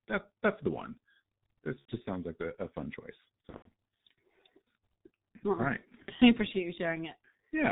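The whole clip carries heavy G.723.1 codec damage. Nothing above 4 kHz survives, so the speech is muffled and hoarse. Consonants smear across the coarse 30 ms frames. The thin, rough sound fits the 6.3 kbit/s mode.

VoIP packet loss concealed by the speech codec appears three times. At 1.79 to 1.95 s, just before "sounds like a a", about 90 ms of audio is missing. After "a a fun choice", from 3.49 to 3.67 s, about 150 ms drops out in scattered pieces. At 6.02 to 6.12 s, between "well all right" and "I appreciate you", another 60 ms goes. Each time the decoder extends its last pitch and filter. This gives a fading buzzy tone or coloured noise, and the speech stays weak briefly afterwards.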